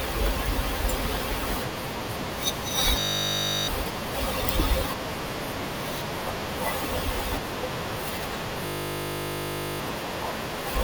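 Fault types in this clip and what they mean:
System hang loop: the host or driver stalled while the audio hardware kept replaying the same 20 ms block from its ring buffer. The sound is replaced by that one tiny segment repeating exactly at 50 Hz. Because the loop is this short, it comes across as a steady buzz at 50 Hz rather than a stutter, from 3.0 to 3.68 s and again from 8.66 to 9.8 s. Roughly 0.7 s and about 1 s of audio are lost.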